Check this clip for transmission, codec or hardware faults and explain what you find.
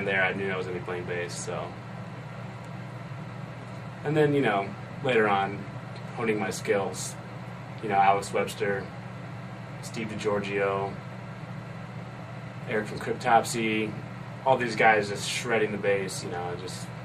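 Nothing stood out on listening that would point to a problem in how this audio was transmitted, encoded or captured.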